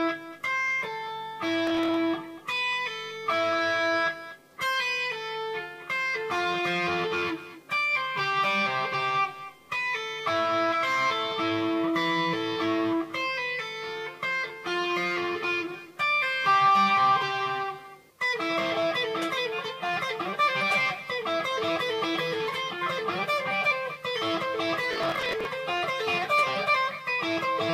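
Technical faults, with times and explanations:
1.67–1.96 s, processor overload crackle: the processor missed roughly fifteen buffers of around 10 ms, each replaying old audio with hard edges, producing a gritty burst of crackle.
24.93–25.45 s, processor overload crackle: about twenty buffers missed their deadline, stale audio repeating with abrupt joins, heard as a longer tearing crackle that stops when the load passes.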